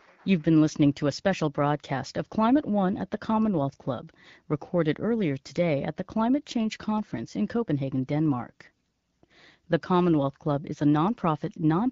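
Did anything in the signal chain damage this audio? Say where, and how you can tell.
No, the speech passes through the AMR wideband (HD Voice) codec at 12.65 kbit/s, a rate at which speech stays clear, and no stage of the chain shows a fault.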